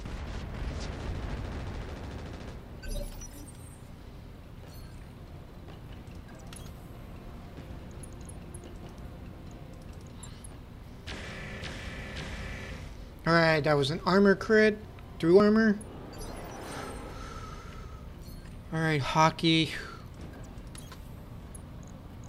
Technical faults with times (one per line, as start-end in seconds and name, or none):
12.96 dropped buffer (overrun)
15.40 dropped buffer (overrun)